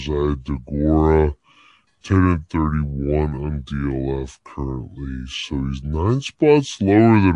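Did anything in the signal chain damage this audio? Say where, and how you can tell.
Yes, at playback, where a wrong sample rate slows and lowers the speech throughout by two-thirds speed, about 7 semitones down. That fits 48 kHz material played at 32 kHz. On a spectrogram, harmonics and formants sit a third lower, with every event stretched in time.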